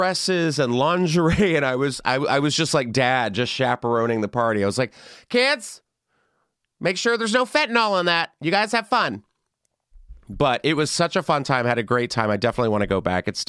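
Nothing stood out on listening to this speech recording.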